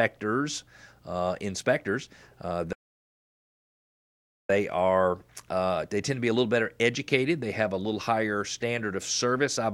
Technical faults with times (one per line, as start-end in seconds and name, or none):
2.73-4.50 playback stall